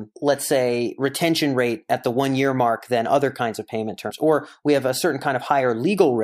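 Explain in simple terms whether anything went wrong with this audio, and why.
Something did go wrong, once. Just after "other kinds of payment", from 4.09 to 4.11 s, there is a quick glitch in the speech. It lasts only a couple of hundredths of a second. This is damaged data in a compressed stream. The audio was stored in a squeezed digital form. Some of the data in that stretch was corrupted. The player could not read it properly, so it produced a brief glitch before finding its place again.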